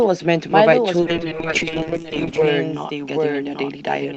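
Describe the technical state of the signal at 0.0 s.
At 0.0 s the speech is already carrying a doubled audio track, present for the whole clip: a second full-band copy trails the original by roughly 0.7 s at about 5 dB lower, dry and without room colour, likely from a second, slower capture path.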